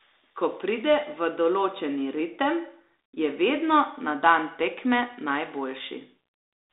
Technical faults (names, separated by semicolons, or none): none